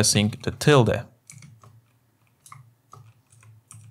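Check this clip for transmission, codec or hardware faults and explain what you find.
Nothing here stands out as a fault of any kind; the whole clip sounds steady and undisturbed.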